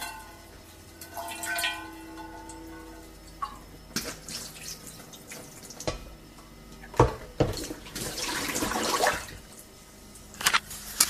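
No technical fault can be heard in this recording of everyday sound. There is nothing to flag at any point along it.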